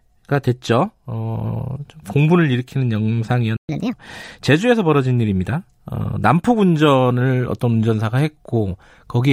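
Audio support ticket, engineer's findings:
Playback stall at 3.57 to 3.69 s. Speech cuts to silence for 120 ms mid-flow, then resumes. Player output path, likely buffer underrun or a blocked audio thread. No data reached the output until the player recovered.

Catch-up at higher speed from 3.69 to 3.93 s. Speech runs 1.5 times fast, pitch raised about seven semitones. Player resampling its backlog to recover the lost time. Speed and pitch return to normal at 3.93 s.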